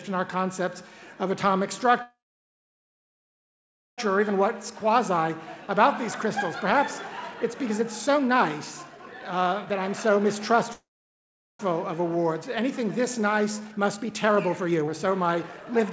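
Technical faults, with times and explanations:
2.02–4.00 s and 10.73–11.61 s: call audio freeze. The sound stalls into a short fading tail and then near-silence, about 1.8 s and 0.77 s long. Delayed packets likely left the jitter buffer empty. Playback then resumes where it stopped, so nothing is lost but about 2 s and 0.86 s of delay are added.
4.12–5.85 s, 7.34–8.37 s, 8.83–10.54 s and 11.99–15.80 s: jitter buffer speed-up. The audio runs at 108%, 121%, 127% and 125% speed with the pitch unchanged, so it sounds hurried. The receiver repeatedly trims pitch-period-sized slices to drain excess buffered delay, removing roughly 0.15 s, 0.2 s, half a second and a second.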